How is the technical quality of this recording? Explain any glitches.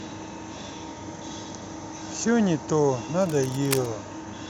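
The recording has one clear glitch, near the end of the speech. From 3.22 to 3.91 s, a dense, uneven scratching and rustling sits over the speech, sitting roughly 10 dB below it, so it is plainly audible without drowning the speech. This is cable scratch noise, likely from a worn cable, connector or control being moved. As the contact shifts, its resistance jumps around rapidly, and those fluctuations ride on the signal as ragged bursts of noise.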